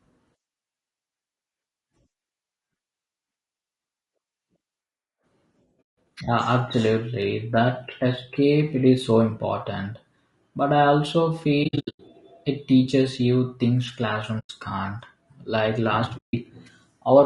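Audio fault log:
throughout: low-delay AAC compression. Speech sounds rough and grainy, with noise between harmonics and a thin top band, likely from AAC-ELD at 32 kbps.
5.81 s, 11.63–12.0 s, 14.39 s, 16.17 s: AAC frame loss with muting. There are soft-edged silent holes of about 0.16 s, 0.28 s (scattered across 0.36 s, between "I also" and "it teaches you things"), 0.1 s (just after "it teaches you things"), and 0.16 s. The decoder zeroed the missing spectra, and overlapping windows faded the sound out and in.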